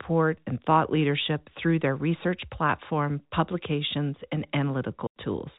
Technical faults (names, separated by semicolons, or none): packet loss filled with silence